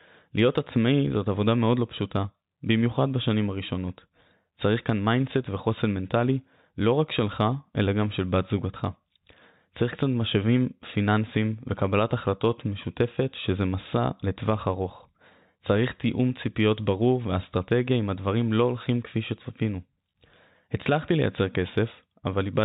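No technical faults can be heard anywhere in the speech. It has come through G.711 mu-law telephone coding at 64 kbps, so nothing above 4 kHz remains, and at most a faint quantisation noise rises and falls with the level.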